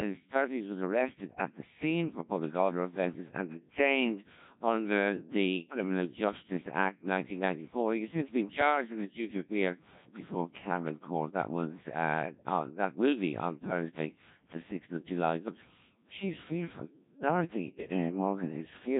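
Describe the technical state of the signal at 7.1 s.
At 7.1 s, as throughout, heavy Codec 2 vocoder damage, fitting roughly 1.3 kbit/s: speech resynthesised from pitch and envelope sounds robotic and buzzy, not smeared, with nothing above 3.8 kHz.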